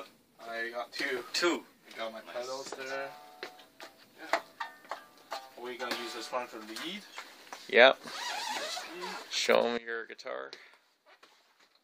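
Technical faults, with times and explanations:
0.96 to 1.56 s, sudden gain jump: the level steps up by about 6 dB with no ramp, then drops back just as abruptly. Background noise rises and falls with the wanted sound, which likely points to a digital gain setting switched in and out instantly.
9.78 s to the end, sudden gain jump: the level falls by about 18 dB in a single step, taking the noise floor down with it, likely from an unramped gain change.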